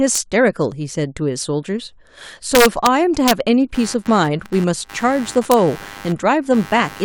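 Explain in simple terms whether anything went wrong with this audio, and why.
A couple of things went wrong. Integer overflow causes harsh cracks at 0.16, 2.55 to 2.87, 3.28 to 3.31, and 5.52 s, where loud peaks wrapped around instead of being capped.

Computer activity noise starts at 3.7 s and runs to the end: a buzz pulsing roughly a hundred times a second, caused by computer load disturbing the audio ground.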